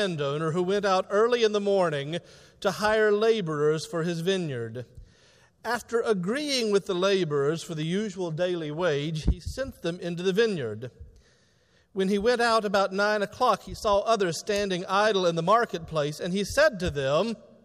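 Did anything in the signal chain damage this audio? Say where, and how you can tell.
Yes. Two sharp snaps sit on top of the sound, a faint one at 7.83 s peaking around -35 dBFS and a much louder one at 14.56 s reaching roughly -15 dBFS, each lasting only a few milliseconds. This points to the analogue wiring stage. These are likely electrical switching spikes, where a nearby switch, motor or static discharge arcs briefly and the cabling picks up the burst as an added click rather than a change to the sound.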